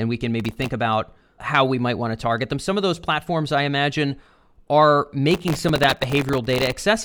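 Just after "we can", from 0.40 to 0.69 s, processor overload crackle tears through the speech until "about how we might", then returns from 5.31 to 6.82 s after "platforms I imagine are". The processor misses buffer after buffer, each under a millisecond long, and stale audio fills each gap. Unlike a single dropout or clipping, it is dense gritty tearing, about twenty ticks in the first burst and well over a hundred in the second, that ends when the load eases.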